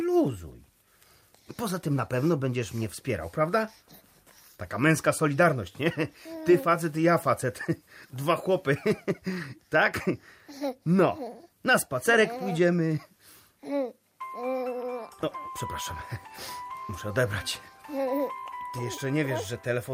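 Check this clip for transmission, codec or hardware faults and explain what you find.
Nothing audible points to a transmission, codec or hardware fault anywhere in the clip.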